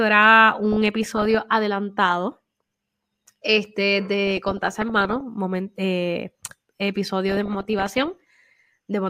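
From 7.29 to 8.17 s the speech breaks into DAB burbling, a bubbling, squelchy chatter with brief chirps over the voice. Weak reception let bit errors, somewhere under one percent, slip past error correction into the MP2 data, so corrupted samples put short noise blips into single sub-bands and wrong scale factors made sub-bands leap in level for up to a frame, which fits a few dozen damaged frames. Unlike packet-loss dropouts, it gurgles instead.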